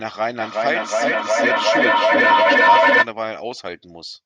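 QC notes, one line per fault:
0.4–3.1 s, feedback echo between two devices: the speech keeps coming back roughly every 400 ms, thinner and more ringing with each pass, and the repeats build until they are about 11 dB above the speech. A second device in the room is replaying this microphone's sound into it, outside its own echo canceller.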